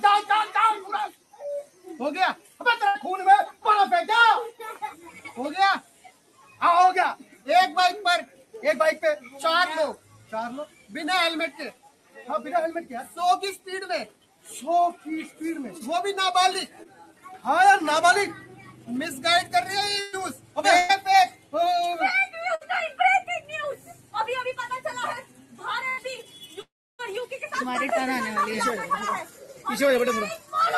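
From start to finish a speech-tuned noise suppressor is working on this non-speech material. This is a noise suppressor applied to music or sounds. It treats steady content and decays as noise, so the level swings by around 10 dB as onsets pass and sustained parts are pulled down. The result pumps and thins. On a waveform the envelope breathes unevenly. On a spectrogram the held energy fades in patches while transients stay solid.

The first sound cut by the noise suppressor runs from 1.12 to 2.6 s and dips by about 11 dB, with roughly 0.7 s of it audibly sunk.

At 2.87 to 2.97 s comes a burst of packet loss. The receiver stretches the last sound for 75 ms and lets it fade, and 80 ms of real audio is lost. It is heard as a brief frozen, dimming patch and then a jump forward. On a spectrogram it shows as a smeared, flattened column followed by a discontinuity.

From 4.95 to 15.41 s the suppressor cuts repeatedly, by up to about 12 dB, over roughly 4 s in total. 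Sustained content sinks and then recovers, which gives a long stretch of fluttering level.

The suppressor cuts again from 16.68 to 17.25 s, by about 12 dB. Inside that cut, at 16.83 to 16.87 s, a short concealed packet loss covers 20 ms with a synthesized continuation. It is a tiny smear or wobble, seen as a thin blurred sliver on the spectrogram.

Further suppressor cuts follow at 18.40 to 18.88 s (about 8 dB) and at 20.34 to 21.54 s (about 12 dB).

Packet-loss bursts land at 20.01 to 20.15 s and 20.77 to 20.91 s, each with about 120 ms concealed and missing. Another lands at 22.55 to 22.63 s, at 60 ms. Each one briefly holds and fades the sound before skipping ahead.

Suppressor cuts continue at 23.41 to 24.13 s and 25.22 to 26.36 s, both about 11 dB. A further 80 ms burst loss falls at 25.89 to 25.99 s.

From 26.61 to 27.01 s a fading continuation gives way to about 310 ms of silence, and roughly 380 ms of audio never returns. 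That is likely a long network dropout. On the waveform it appears as a tapering tail and then a flat gap.

A last suppressor cut of about 10 dB runs from 29.25 to 30.52 s.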